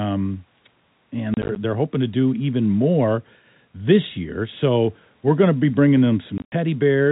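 From 1.34 to 1.56 s and again from 6.38 to 6.52 s, packet loss filled with silence punches hard-edged gaps into the speech, about 80 ms and 110 ms in total, pointing to 10 ms packets. The waveform drops to silence, and the spectrogram shows blank vertical slots under the telephone-band 4 kHz ceiling.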